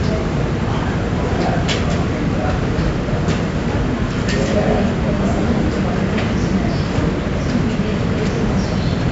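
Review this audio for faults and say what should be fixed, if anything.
4-bit ADPCM compression runs through the whole clip. Each sample is stored as a coarse 4-bit step from a prediction. A gritty hiss rides on every loud passage. Sharp attacks distort because the step size cannot grow fast enough. Nothing is heard above 7.7 kHz, which fits a 16 kHz sample rate at 64 kbps. To prevent this, keep a lossless master and export with a higher-quality codec instead of ADPCM.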